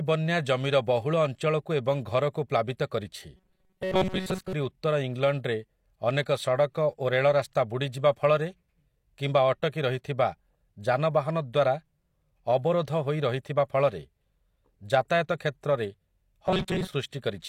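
From 3.37 to 4.53 s, just before "ଉତ୍ତର ଇଂଲଣ୍ଡରେ ଅନେକ ସଡ଼କ", and 16.47 to 16.87 s, robotic sound buzzes at 188 Hz, likely from about 5.3 ms buffers repeated over most of the real audio. Spectrograms show rigid 188 Hz harmonic stripes; waveforms show a repeating 5.3 ms cycle.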